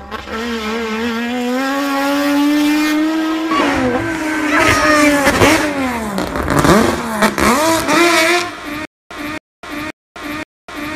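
From 8.85 s to the end, a stutter with silent gaps: a 272 ms burst repeats four times, each followed by about 254 ms of digital silence, giving a steady 526 ms cycle. This likely comes from a stalled stream replaying its last fragment, with the intervening audio lost.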